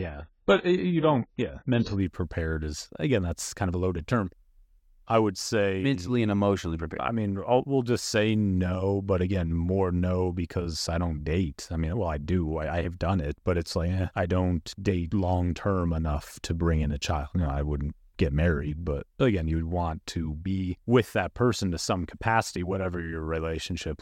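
An adaptive stream starting at a low bitrate affects 0 to 2.0 s. The player opened on a lean version to start quickly, so the speech sounds dull, with nothing above 7.6 kHz and heavier codec smearing, which fits 16 kbit/s AAC. It then steps up without a gap to fuller sound, consistent with 96 kbit/s.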